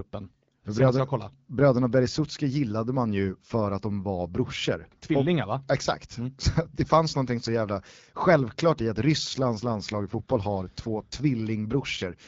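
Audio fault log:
9.29–11.22 s, AMR rate drop: for nearly two seconds the speech turns rougher and more synthetic, with a raspy, buzzy edge, which fits the codec stepping down from 12.65 to 8.85 kbit/s and spending fewer bits on the speech itself. On a spectrogram the bandwidth stays the same and there is no gap, but the harmonic detail looks coarser and smeared. The waveform runs unbroken, and the clean HD Voice sound returns once the rate recovers.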